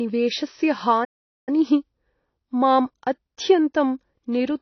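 Heavy lossy coding, most likely AAC compression at a low bitrate in the region of 24 kbps, is present across the whole speech clip. To fit so few bits, the encoder lowers its cut-off and quantises the remaining spectrum coarsely. The speech therefore sounds dull and muffled throughout, with the damage plainly audible: sibilants come out smeared and fizzy, and held sounds take on a watery, warbling texture.

At 1.04 s a playback stall interrupts the audio, most likely because the player ran short of data or its output thread was held up. The sound cuts out mid-flow and stays silent for roughly 430 ms, until 1.49 s, when it resumes.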